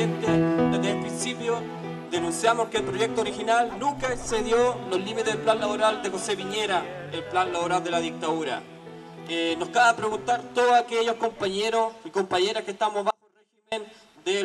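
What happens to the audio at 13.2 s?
At 13.2 s the sound falls into an audio dropout to a faint residue, running from 13.11 to 13.72 s, about 0.61 s. The signal was likely lost upstream while the path after the break stayed live, so only a faint leak remains, roughly 35 dB below normal. On the waveform the envelope collapses abruptly to a thin band and snaps back; a spectrogram shows a sharp-edged, nearly empty vertical slot rather than a taper.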